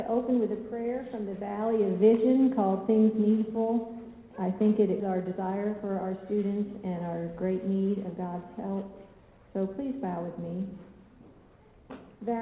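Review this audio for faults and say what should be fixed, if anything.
At 5.0 s the audio lurches forward with no pause. Roughly 0.7 s of material is simply gone, and the sound on either side is spliced together with nothing filled in. This is a skip ahead: a stretch was discarded, either in transit or when an overflowing jitter buffer dropped it, while later audio was already queued. To prevent it, size the jitter buffer and its overflow handling so a burst of late packets is drained gradually rather than cut.

From 5.1 to 6.15 s, and again from 6.97 to 8.12 s, the sound hurries along at the same pitch, running at 110% and then 111% speed. This is jitter buffer speed-up. After the buffer overfilled, the receiver repeatedly trimmed slices one or a few pitch periods long, removing around 0.1 s in the first stretch and 0.15 s in the second. To prevent it, reduce the network jitter that causes packet bunching, or let the buffer shrink more gently so the tempo change stays inaudible.

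The 4 kHz ceiling on the sound comes from the G.711 mu-law call path, which is expected for that codec and is not a fault.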